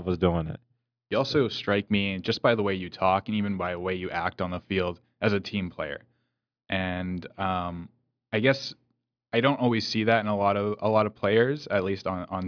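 Speech recording, nothing technically wrong with it.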